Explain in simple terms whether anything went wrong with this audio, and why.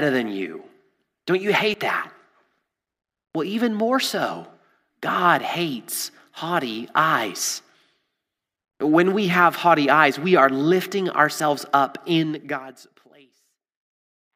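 Dropped buffer (overrun) at 1.74 s and 11.4 s, just after "eyes we are lifting": the speech skips ahead, likely because sound was overwritten before the recording program saved it.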